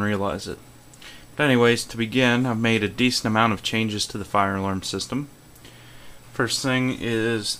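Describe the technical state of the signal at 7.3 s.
At 7.3 s the signal is intact, with no audible fault at that moment.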